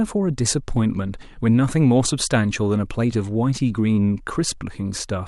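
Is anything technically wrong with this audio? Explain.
No, nothing technically wrong stood out on listening to this speech recording.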